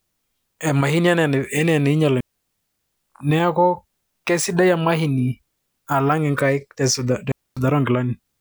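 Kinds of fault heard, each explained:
Digital wireless dropout: at 2.20 to 2.94 s and again at 7.32 to 7.57 s, the receiver loses too much of the radio data stream and mutes, leaving clean holes of near silence, about 0.73 s then 0.25 s, with no noise burst either side.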